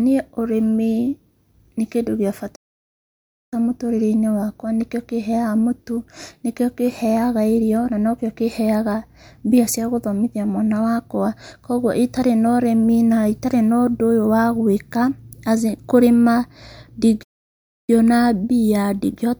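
At 2.55 s the speech cuts off mid-flow and silence holds until 3.53 s, about 0.96 s, before resuming; a second gap runs from 17.23 to 17.90 s, about 0.65 s. These are playback stalls, likely from the player starving for data or its thread being blocked. On a waveform each shows as a flat, near-silent stretch, and on a spectrogram as a dark, empty vertical band with abrupt edges.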